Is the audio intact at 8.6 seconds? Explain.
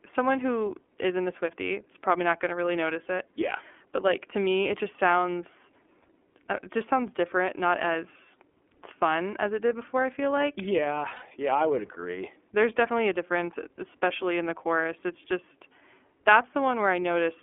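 No. The iLBC codec applies throughout the speech, 8.6 s included, coding each frame's excitation independently, consistent with 30 ms frames at 13.3 kbps. Only about 250 Hz to 3.4 kHz passes, so the speech sounds narrow, muffled and plainly rough and synthetic.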